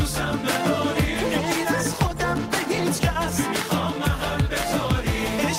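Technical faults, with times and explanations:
1.18–2.92 s, call bitrate drop: the encoder's rate falls from 64 to 22 kbps, bottoming out for about 1.7 s, so the sound turns coarse and muffled as high frequencies vanish. On a spectrogram the upper band cuts off abruptly, then returns near 2.92 s.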